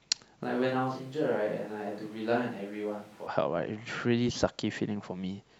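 From 0.44 to 3.26 s the speech abruptly turns hollow, roomy and about 10 dB quieter. It is likely a switch to a distant microphone.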